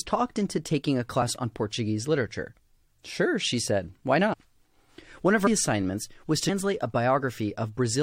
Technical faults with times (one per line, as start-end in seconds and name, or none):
1.21 compressed frames skipped
4.32-4.34 compressed frames skipped
5.46-5.48 compressed frames skipped